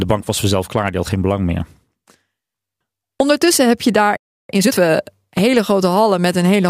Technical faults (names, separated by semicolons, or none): playback stall; time-compressed catch-up